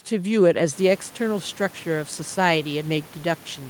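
No technical faults can be heard anywhere in the audio. Background noise from the room rises by about 12 dB around half a second in and then sits about 25 dB below the speech, which is part of the recording rather than a problem with the system.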